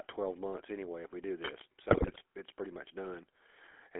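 Speech runs through a GSM full-rate codec for its whole length, giving a buzzy, gravelly roughness and a spectrogram confined to roughly 300 Hz to 3.4 kHz, which fits the 13 kbps full-rate coder. From 1.40 to 1.62 s, just after "anyway if we do", cable scratch noise adds dense, uneven rustling only a little below the speech level. On a spectrogram it appears as broadband irregular speckle, and it likely comes from a worn cable or connector being moved. From 1.90 to 2.21 s, just before "it's pretty much", GSM bit errors break the speech into squawks, pops and gargling. The waveform shows sudden level jumps and the spectrogram shows smeared, blocky frames, which points to a corrupted run of roughly fifteen frames on a weak link.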